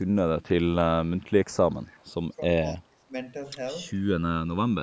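Throughout, the channels drift apart: their relative delay creeps to under a millisecond, which fits clocks mismatched by a couple of hundred parts per million, producing slow, sweeping flanging in mono. From 1.75 to 2.05 s an echo leak is heard, a faint copy about 30 dB down, 265 ms late, likely from an echo canceller leaving loudspeaker pickup behind. Speech is then suppressed in double talk at 2.36 to 2.5 s, a mild dip of about 10 dB, and at 2.72 to 3.13 s, a deeper cut of about 25 dB, likely the canceller ducking both talkers together.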